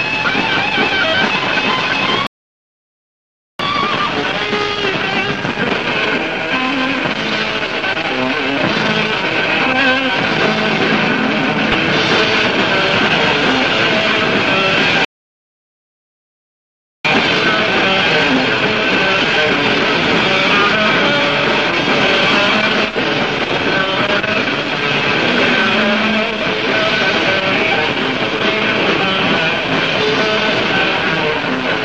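The audio drops to silence twice, from 2.27 to 3.59 s and from 15.05 to 17.05 s. This is a playback stall, likely from the player running out of data, and each one shows as a flat, empty stretch in the waveform. Each stall is followed by time-compressed catch-up, at 1.25x from 3.59 to 6.59 s and at 1.5x from 17.05 to 20.05 s. The sound is hurried but keeps its pitch, and the spectrogram shows tightly packed events with no frequency shift. Between 11.72 and 11.83 s there is a short DAB burbling patch, where bit errors that got past the error correction upset single sub-bands for a handful of frames, appearing as isolated blocky bursts in separate frequency bands.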